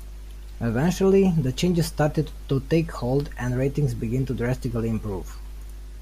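A speech recording with mains hum running the whole way through: a steady 50 Hz drone, plus a bit of low harmonic buzz, sitting roughly 20 dB under the speech. The 50 Hz pitch points to the power line leaking into the signal, most likely through a ground loop between bits of gear or a transformer sitting too close to a cable or the mic.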